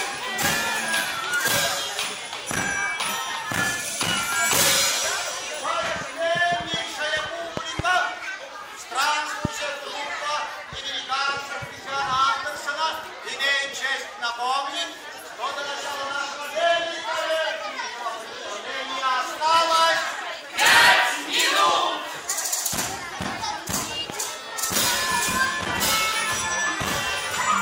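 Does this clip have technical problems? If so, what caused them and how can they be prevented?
Yes. Loud pops strike at 7.57–7.82 s (a double), 9.45–9.47 s and 24.10–24.12 s. They sit well above the sound, likely from a voltage spike such as a switch or static. To prevent this, ground equipment well and avoid plugging or switching during recording.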